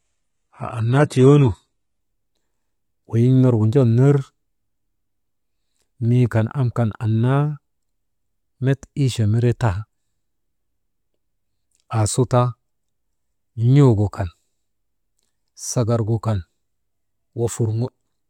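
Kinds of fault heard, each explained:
Adaptive stream starting at a low bitrate: the player opens on a cheap version of the stream to start fast. For the first 2.0 s the speech has nothing above 11.8 kHz and heavier codec smear, which fits roughly 16 kbit/s HE-AAC, then it jumps cleanly to something like 96 kbit/s AAC-LC with no gap.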